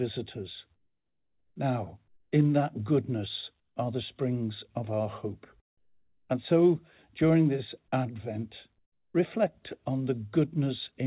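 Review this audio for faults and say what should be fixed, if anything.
Comfort noise in place of the background at 0.76–1.56, 2.08–2.32, 3.6–3.76, 5.78–6.30 and 8.78–9.14 s. In each pause the real room tone, already about 54 dB below the loudest sound, gives way to a flat, featureless hiss about 8 to 11 dB quieter, then snaps back when sound resumes. That points to discontinuous transmission with synthesized fill, likely driven by the sender's voice detector. A noise gate or dropout would leave true silence rather than steady hiss. The band stops at 4 kHz, which fits G.711 A-law at 64 kbps. To prevent it, disable DTX/VAD on the sending side so the genuine background is transmitted continuously.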